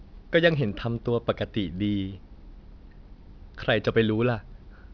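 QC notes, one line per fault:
throughout, aliasing: content above 5.5 kHz folds back below it, leaving sibilants gritty and metallic. This fits an unfiltered drop to 11 kHz. Aliases sit about 30 dB down.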